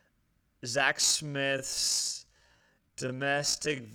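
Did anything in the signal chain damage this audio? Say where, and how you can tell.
Yes. The speech has a time-stretched section from 1.0 s to the end of the clip. There the pace drops abruptly to about half speed, 0.51 times the original, while the pitch stays where it was. The slowed part drags. The cause is likely a time-stretch step in processing. It lengthened the audio by repeating short overlapping pieces rather than resampling, so the timing changed but the pitch did not.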